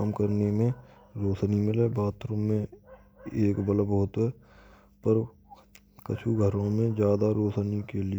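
Nothing goes wrong anywhere in this stretch of speech, so there's no fault to point to at any moment.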